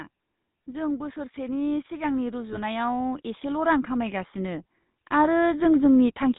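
Throughout, the speech runs through the GSM full-rate codec, whose coarse pulse excitation and 4 kHz ceiling give a plainly buzzy, gravelly roughness consistent with 13 kbps. From 0.65 s to 6.34 s, automatic gain rising slowly lifts the level by about 13 dB, so the voice and background swell together. Between 2.50 and 2.58 s, GSM bit errors corrupt the decoder's parameters, producing a brief squawking, gargled burst that fits roughly four damaged frames.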